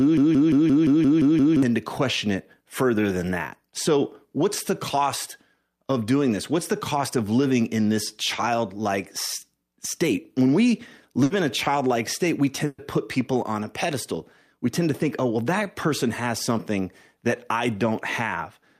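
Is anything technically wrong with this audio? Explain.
Yes, there are two kinds of fault: a broken-record loop at the very start and two bursts of packet loss later on.

From 0 to 1.6 s the clip opens on a broken-record loop that is already under way. A 174 ms fragment plays eight times, back to back and identical each time. The likely cause is a player, encoder or stream that stalled and kept resending the last piece it held, so whatever belonged in that stretch is gone. Unlike a packet-loss fill, the repeats are exact copies and do not fade.

Bursts of packet loss occur at 11.23 to 11.32 s and at 12.66 to 12.80 s. Each time, packets arrived too late or not at all, and the receiver stretched the last sound to cover the gap while turning it down. The result is a brief held buzz or fading hiss, after which the sound resumes further along. The first burst carries about 70 ms of fill and drops 60 ms. 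The second fills 120 ms, ends in 30 ms of silence, and loses 120 ms. Unlike the loop, each is one decaying extension rather than exact repetitions.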